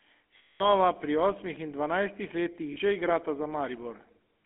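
Throughout the speech, the GSM full-rate codec is plainly audible. The line band runs from roughly 250 Hz to 3.5 kHz, so there is no low body and no air on top. The codec models the vocal tract and drives it with a coarse, regularly spaced pulse excitation that keeps only a fraction of the detail. This gives the voice a buzzy, gravelly texture, and the quality fits the 13 kbps full-rate mode.

From 0.38 to 0.69 s there are lost GSM frames, just before "pri osmih in dvanajstih". The decoder replaces the missing audio, about 220 ms of it, by reusing the parameters of the last good frame. The result is a rough, metallic ringing hold instead of the speech carrying on. A shorter loss of about 40 ms falls between 2.72 and 2.79 s, between "pri osmih in dvanajstih" and "že igrata". It is heard as a brief metallic smear across the join.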